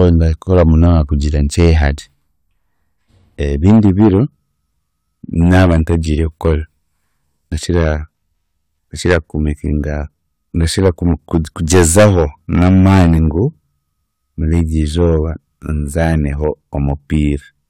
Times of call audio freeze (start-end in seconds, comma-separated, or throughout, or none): none